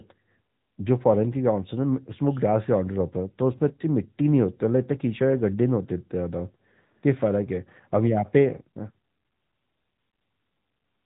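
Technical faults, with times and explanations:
Throughout: AMR narrowband mobile codec. Nothing passes above 3.8 kHz, and the speech has a plainly audible buzzy, synthetic edge because it is rebuilt from a vocal-tract model and a few pulses, which fits a mid AMR-NB rate near 10 kbps. A simple low-pass would only dull it.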